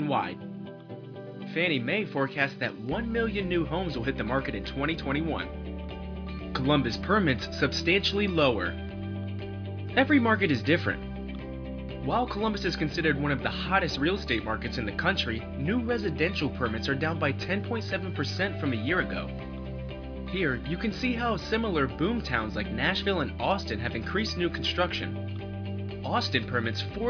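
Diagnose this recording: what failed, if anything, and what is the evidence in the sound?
Nothing failed; no fault is audible anywhere.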